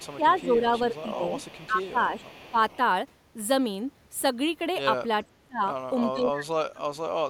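From 0.0 to 2.77 s there is an echo leak: a faint delayed copy of the speech trails the original by about 457 ms, sitting roughly 25 dB below it. The likely cause is a far-end loudspeaker whose echo canceller failed to remove all of the pickup.

The speech is also suppressed in double talk, likely because the canceller could not separate the talker from echo while both sides spoke and turned everything down. From 0.17 to 1.33 s and 1.67 to 2.78 s, the level dips by around 10 dB. From 5.29 to 5.63 s and 6.13 to 7.13 s, it drops by about 30 dB, nearly cutting the speech out.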